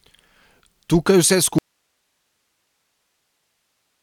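At 1.59 s the speech cuts off abruptly and does not return before the clip ends. This is an audio dropout to a faint residue: the gap holds only steady hiss, roughly 55 dB below the signal. The hiss shows the path stayed live, most likely a lost feed upstream rather than a dead output. A natural pause or fade would taper gradually, and a total dropout would leave digital silence.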